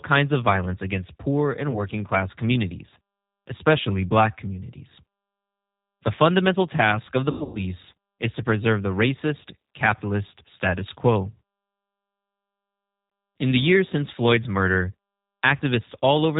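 Throughout, the speech carries G.729 codec damage. The sound is rebuilt from a vocal tract model, pitch and a few pulses per frame, which fits an 8 kbit/s stream. Nothing above 4 kHz survives. Voices sound narrow, rough and plainly synthetic.

At 1.71 to 1.83 s comes VoIP packet loss concealed by the speech codec. The decoder fills a gap that fits one lost 20 ms packet by repeating its last pitch and filter. A brief smear results. Recovery drags on to 1.83 s.

At 7.31 to 7.62 s, concealment returns in earnest. About 220 ms goes missing across 240 ms, the longest run lasting 120 ms. The speech stretches into a fading, stretched sound. It stays weak and distorted until 7.62 s.

At 13.1 s, a single short dropout is concealed. It leaves a quick blip.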